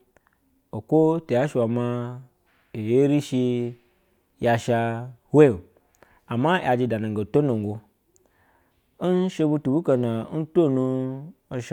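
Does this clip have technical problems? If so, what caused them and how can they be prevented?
No, nothing stood out on listening to this speech clip.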